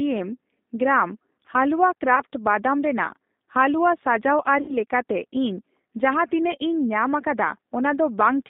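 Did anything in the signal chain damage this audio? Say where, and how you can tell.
Yes. The damage comes from the codec stage and from the network.

The whole clip carries G.729 codec damage, plainly audible as a slightly rough, synthetic quality in the speech. On a spectrogram the energy sits in a band from about 200 Hz to 3.7 kHz, with a hard ceiling and nothing above it. That fits an 8 kbit/s G.729A-type coder, which rebuilds each frame from a vocal tract filter, a pitch predictor and a few pulses rather than sending the waveform itself.

VoIP packet loss concealed by the speech codec occurs twice, at 2.16 to 2.22 s and at 4.61 to 4.77 s. The first event fits a single lost 10 ms frame, and the second fits about 70 ms lost. The decoder stretched its last pitch and filter forward. A spectrogram shows harmonics frozen into flat horizontal lines that fade, and the waveform repeats one period at falling amplitude. 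The sound stays weak for a short tail after each event because every frame builds on the one before.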